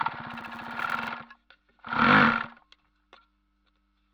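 Filter restarted on every block, from 0.31 to 1.11 s: a filter in the chain loses its stored state at each block boundary and starts again from silence, so every block opens with a small transient. These transients repeat every 10 ms, which blends into a 100 Hz buzz laid over the sound. The buzz rises and falls with the level of the audio, growing stronger on louder passages and fading as the sound quietens.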